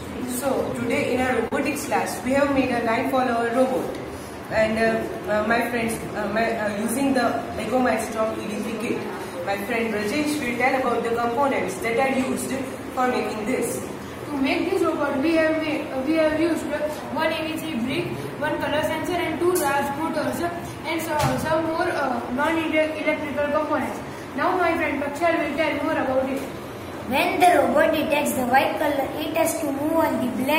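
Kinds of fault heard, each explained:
Clock drift between sender and receiver: The sender's clock runs roughly 3% slower than the receiver's, so the jitter buffer keeps draining. The receiver must keep padding the audio to stay in step, which leaves small, unevenly spaced timing hiccups throughout the clip.
Repeated timing corrections: From 0.18 s to 30.53 s the receiver keeps inserting short repeated pieces to make up for the slow sender. Playback runs at 98% speed overall and gains about seven tenths of a second. Every edit lengthens the audio.
Short stall from a late packet: At 1.48 to 1.54 s a packet was late and the buffer ran empty. The receiver held the last sound for 38 ms until the packet arrived, then resumed where it left off. Nothing is lost, but a sound is prolonged, with a slight buzz or dip.
Scattered short gaps: Four stretches, at 5.98 to 6.75 s, 10.48 to 11.25 s, 19.09 to 22.12 s and 28.09 to 29.22 s, each have three or four isolated lost or late packets. 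The receiver patched each one by continuing the previous sound. The holes are only about 10 to 15 ms long, heard as brief ticks or smears.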